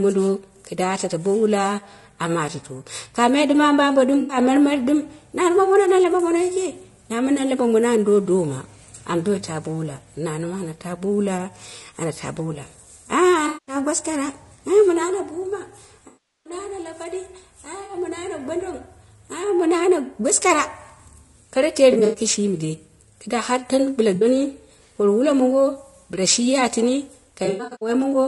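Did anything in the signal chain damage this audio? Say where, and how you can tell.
Yes, at the codec stage. Across the whole speech clip the voice sounds rough and grainy, with noise filling the gaps between harmonics and a thin, synthetic-sounding top band. That points to low-delay AAC compression, likely AAC-ELD at a low rate, around 32 kbps. Its short frames cannot resolve pitch harmonics finely, so at this rate the encoder runs short of bits and smears noise across the spectrum.

Further down the chain, in the network or transport stage, there is AAC frame loss with concealment at 4.20–4.37 s, 13.47–13.75 s, 16.07–16.53 s, 17.83–17.93 s, 21.93–22.19 s, 24.15–24.25 s and 27.45–27.89 s. The shorter gaps, of 60 to 120 ms, come out as smeared, phasey patches. The 380 ms gap near 16.1 s decays toward silence and fades back in. At about 22 s and 27.5 s the losses are scattered bursts, the longest around a tenth of a second. 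In each case the decoder is rebuilding the missing frames from the last good spectrum.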